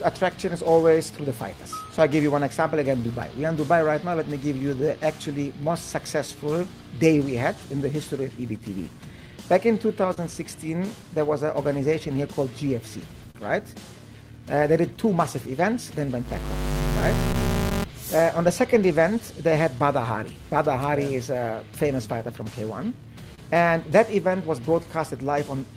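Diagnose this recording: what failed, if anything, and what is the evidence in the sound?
A filter restarted on every block, in the call-processing or driver stage, leaves a steady buzz at 200 Hz through the whole recording. Its level rises and falls with the signal. The filter discards its internal state at each block boundary and starts from zero, so each block opens with a small transient. Those transients repeat at the block rate, and a 200 Hz rate points to a 5 ms processing block.

Clock drift between sender and receiver, at the network and jitter-buffer stage, runs through the entire recording. The sender's clock runs roughly 3 percent slow relative to the receiver's. The receiver consumes audio faster than it arrives, so the jitter buffer keeps draining. The receiver has to keep compensating to avoid running dry, and that compensation produces the recurring, unevenly spaced timing hiccups heard across the clip.

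Repeated timing corrections from 0.70 s to 25.33 s are the receiver's response to that drift. It keeps repeating short pieces of audio, always in the same direction, which lengthens the material by around half a second overall. The effective playback speed is 98 percent. Each edit is small and unevenly spaced, so the result is an unsteady tempo with occasional slight stutters rather than distinct glitches.

Scattered short gaps come from lost or late packets on the network, patched by continuing the last sound. The first cluster has about seven between 0.82 s and 6.57 s, each about 10 ms or shorter. About four fall between 10.14 s and 13.37 s, the longest around 40 ms. About seven more occur between 17.00 s and 19.82 s, and about three between 21.95 s and 24.86 s, the longest around 30 ms. They sound like brief ticks and smears.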